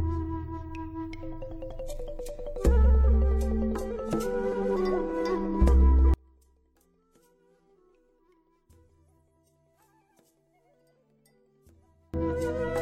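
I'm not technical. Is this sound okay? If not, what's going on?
No. From 6.14 to 12.14 seconds, the sound nearly vanishes. Only a faint trace is left. The likely cause is one channel inverted. One stereo side is flipped upside down. When both sides are combined, they cancel each other out.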